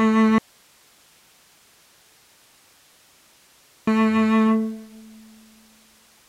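From 0.38 to 3.87 s, an audio dropout to a faint residue: music cuts abruptly to hiss, likely a lost feed into a live path.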